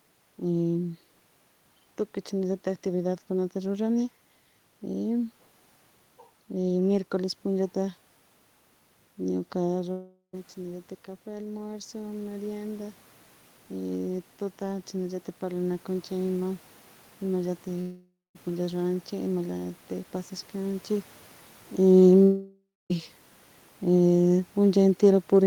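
Speech with audible room noise, carrying three kinds of fault. Automatic gain rising runs from 9.28 to 19.38 s. Around 9.5 s the talker moves away and the input falls about 10 dB, so the gain control slowly lifts its gain by about 8 dB, and voice and room noise swell back up together over several seconds. Three long network dropouts cut out audio at 9.91–10.35 s, 17.81–18.37 s and 22.23–22.92 s, losing about 420, 540 and 680 ms. These were likely caused by packets never arriving. Each time the receiver stretches the last sound into a fading buzz or hiss, leaving silence for about 110, 210 and 270 ms before the sound resumes with the lost part gone. Automatic gain falling starts at 21.80 s and lasts to the end. After the talker moves around 21.5 s, the sound sinks steadily along with its background as the gain is pulled down.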